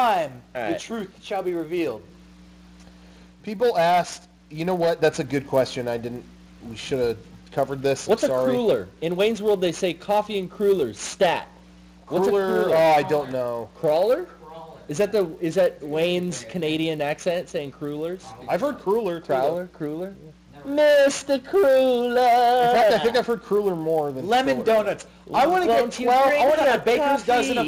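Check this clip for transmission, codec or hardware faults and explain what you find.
One fault runs through the whole clip: the resampler restarted on every block. The rate conversion, which fits an upsampling from 24 kHz to 48 kHz, treated each 10 ms block on its own, so every block edge was interpolated against missing neighbours and carries a small error. Those errors repeat at 100 Hz, heard as a low buzz riding on the sound and dropping out in silences. A spectrogram shows faint vertical lines every 10 ms with harmonics of 100 Hz; the waveform shows small kinks at each block boundary.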